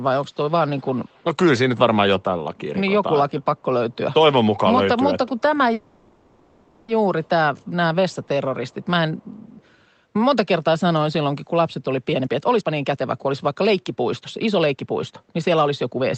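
From 0.5 to 1.24 s a faint delayed copy of the speech trails the original by 182 ms, roughly 30 dB down. This is an echo leak, likely from a far-end loudspeaker whose echo canceller let residual pickup return. Weaker fragments, around 40 dB down, recur at 3.91 s, 5.38 s, 7.24–7.71 s, 8.1–8.28 s, 8.68–8.86 s and 9.17–9.66 s.

At 5.73 s a call audio freeze sets in. The last sound is stretched into a fading synthetic fill for 1.15 s, likely because delayed packets left the jitter buffer empty. At 6.90 s the speech resumes where it stopped, so nothing is lost but a gap is inserted.

From 12.12 s to 16.10 s a jitter buffer speed-up plays the speech at about 122% of normal speed with unchanged pitch. Short pitch-period segments are dropped repeatedly to shed the excess buffered delay, about a second in total. The result sounds hurried within the 8 kHz band of the Opus call path.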